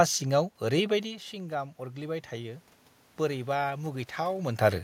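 A speech clip where, from about 0.91 s to 2.72 s, you get automatic gain rising. Around 1 s the talker seems to drift back from the mic, so the level drops by about 12 dB, and the gain control responds by slowly winding itself up by about 4 dB over nearly two seconds. You can hear the voice and the room noise behind it swell together, which gives it away as gain rather than the talker coming back in.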